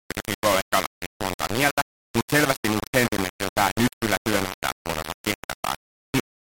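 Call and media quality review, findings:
Low bit depth without dither, likely at a fixed-point gain or format-conversion stage: samples rounded to 3 bits, no dither, throughout. Error tracks the signal; speech heavily grainy and gritty, noise at roughly signal level, quiet passages dropping out or sputtering between steps.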